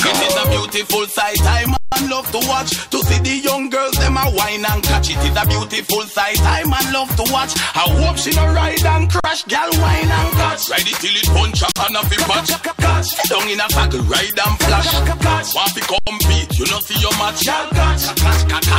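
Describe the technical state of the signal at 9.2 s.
At 9.20 s the output hits an underrun with held sample, lasting until 9.24 s, about 43 ms, which fits a 2048-sample buffer running dry. The converter freezes on its last value, so the sound flattens into a held level, then resumes where it paused with only a soft edge.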